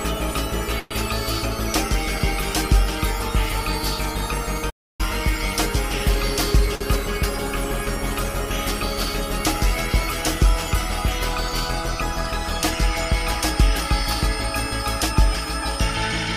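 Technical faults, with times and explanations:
0.79–0.92 s, call audio freeze: the sound is held over as a fading buzz for about 112 ms, likely from delayed packets, then resumes intact rather than dropping into silence.
4.69–5.01 s, playback stall: the output goes fully silent for about 290 ms, likely because the player ran out of data, unlike a freeze's filled buzz.
6.76–6.82 s, short stall from a late packet: one sound is stretched for 50 ms while a late packet is awaited, then continues with nothing lost, briefer than a freeze.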